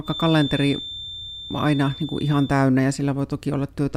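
From the start to 2.6 s, a thin, steady feedback whistle near 3.6 kHz sits roughly 15 dB below the speech, swelling and fading slowly in level. The likely cause is a loudspeaker-to-microphone loop held just at the feedback point. A spectrogram shows one unbroken horizontal line.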